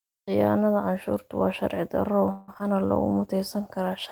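Speech, with three network-related faults late in the clip. Right after "canshuurtu waa sharci darro", from 2.31 to 2.66 s, repeated packet loss leaves five gaps, the longest about 0.17 s. The receiver fills each one by stretching the last sound, so more than half of that stretch is concealment and the voice turns choppy and robotic, with pieces missing. From 2.75 to 3.14 s, a jitter buffer slow-down sets in as the receiver rebuilds its reserve by repeating small slices of audio. That adds about 55 ms and plays the passage at 88% speed at the same pitch, so the sounds come out drawn out. From 3.12 s to the end, a call bitrate drop forces the encoder onto far fewer bits, which fits a fall from 32 to 18 kbps, and the voice turns coarser and duller for the last second.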